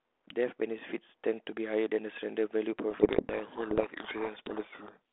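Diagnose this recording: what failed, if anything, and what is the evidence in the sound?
A codec payload misread at the decoder: from 2.9 s to about 4.97 s the speech is buried in harsh distortion, after clean narrowband telephone audio that fits 32 kbit/s G.726. The decoder takes G.726 code words with their bit order reversed, so each difference step is wrong. Low-bitrate G.726 hiss would sit under the whole clip, not switch on abruptly.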